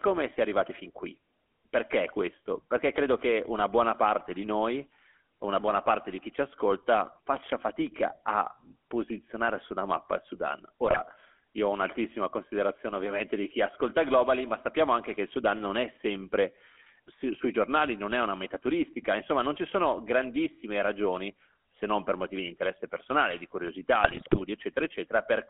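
The whole recording passed through the GSM full-rate codec, which rebuilds the vocal tract from a coarse pulse-driven excitation, which fits a 13 kbps stream. The speech is confined to roughly 250 Hz to 3.4 kHz and carries a plainly audible buzzy, gravelly roughness.

GSM bit errors then corrupt the decoder's filter, pitch and gain values. From 10.86 to 11.01 s, just before "io ho un'altissima considerazione", and from 24.04 to 24.42 s, after "di interesse personale di", the speech breaks into squawks, pops and gargling.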